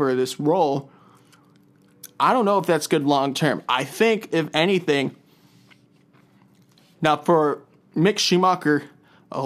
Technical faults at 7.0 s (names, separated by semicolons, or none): sample clock jitter